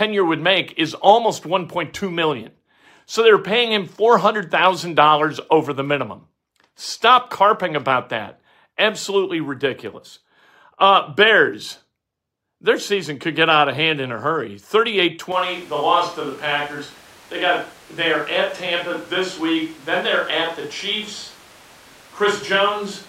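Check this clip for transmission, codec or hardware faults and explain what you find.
One fault turns up, and it runs to the end of the clip. At 15.32 s the speech abruptly changes character. This is a switch to a distant microphone. The close microphone's feed likely dropped out, leaving only a mic further from the talker. The sound turns roomy and hollow at once. The bass thins out. The level falls by roughly 5 dB. Room noise comes up, sitting only about 25 dB below the speech. There is no fade, just a hard cut.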